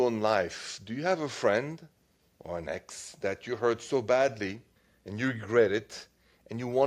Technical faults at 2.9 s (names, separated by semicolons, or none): none